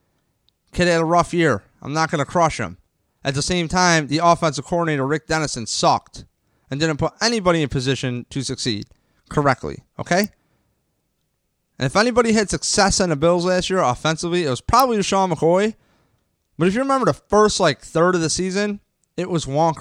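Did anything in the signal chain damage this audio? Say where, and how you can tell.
Yes. Two sharp, isolated snaps sit on top of the speech at 10.24 s and 14.80 s, each only a few milliseconds long and peaking at about -10 dBFS. Their instant onset, with no effect on the speech around them, points to the analogue wiring. These are likely electrical switching spikes, where a nearby switch, motor or static discharge arced and the audio line picked up the burst.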